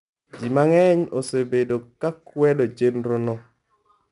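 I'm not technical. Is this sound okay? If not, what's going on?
No. The speech has a gritty, sandy hiss riding on it from start to finish, getting rougher whenever the voice is loudest, and the sound is slightly dull, with nothing above about 10.6 kHz. This is 4-bit ADPCM compression. It saves each moment of sound as a tiny step from a guess, and those steps are too coarse to follow the voice exactly, so the leftover error comes through as that grainy noise.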